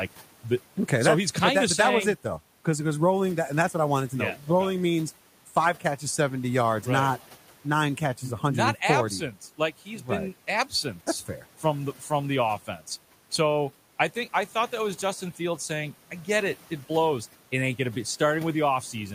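The noise suppressor cuts into the speech six times: 0.08–0.77 s, before "okay so he's kind"; 4.36–4.47 s; 5.46–6.0 s, before "seventy yards right not"; 7.31–7.65 s, before "nine catches"; 9.33–10.08 s; and 10.47–11.63 s. It mistakes quiet speech for noise. Drops reach about 8 to 12 dB. Words sound swallowed or faint.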